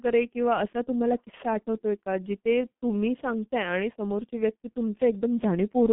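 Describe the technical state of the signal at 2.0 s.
At 2.0 s, as throughout the clip, the speech has passed through a G.723.1 codec at a low rate consistent with about 6 kbit/s. Its slow 30 ms frame model leaves the speech muffled and hoarse with smeared consonants, and nothing remains above 3.8 kHz.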